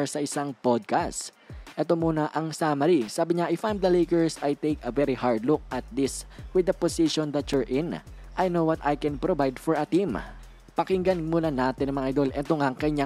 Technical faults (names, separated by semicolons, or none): block of digital silence